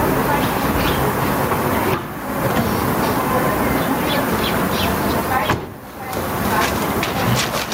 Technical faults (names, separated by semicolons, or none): gain pumping